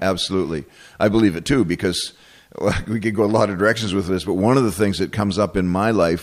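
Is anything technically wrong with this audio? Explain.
No, nothing in this speech recording points to a technical fault in the signal.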